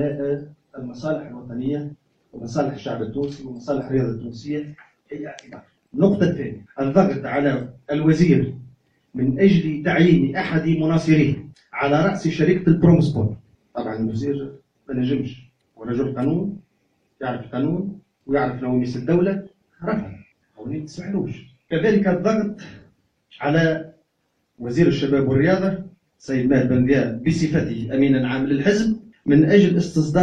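No technical faults can be heard anywhere in this clip. At no point does the sound falter or change in a way that suggests something went wrong.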